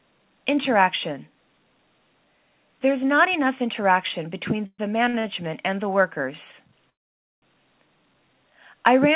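A call audio freeze occurs at 4.66–4.80 s and again at 6.90–7.44 s. In each, the last sound trails off into silence, about 60 ms of it in the first and nearly the whole 0.53 s in the second. The audio then resumes where it stopped, with nothing lost, likely because packets were delayed and the jitter buffer ran dry. Short stalls from late packets follow at 5.08–5.15 s and 5.19–5.26 s, lasting 50 and 45 ms. In each, a sound is held slightly too long, with a faint buzzy dip, while the receiver waited for the late packet before continuing. All of this is carried over a call path with nothing above 4 kHz, which points to a narrowband codec such as G.711.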